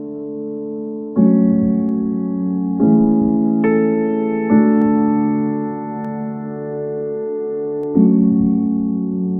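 Four isolated clicks occur, at 1.89 s, 4.82 s, 6.05 s and 7.84 s. Each is a single sharp tick with no gap in the sound around it, showing as a thin vertical line across the whole spectrum. The likely cause is dropped samples: a tiny fraction of a millisecond of the stream goes missing, so the waveform steps abruptly from one value to a later one. That discontinuity produces the broadband click, while far too little audio is lost to hear anything missing.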